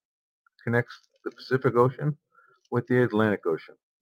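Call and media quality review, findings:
Sample clock jitter, whole clip. Fine hiss and roughness riding on the speech, strongest on loud and bright passages, absent in pauses. Probable component: converter clock. Timing wander of a few microseconds scales the error with waveform slope, leaving noise about 40 dB below the signal.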